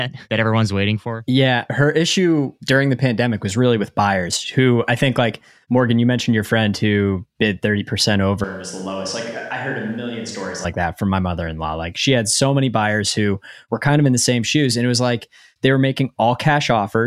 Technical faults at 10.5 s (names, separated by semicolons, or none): switch to a distant microphone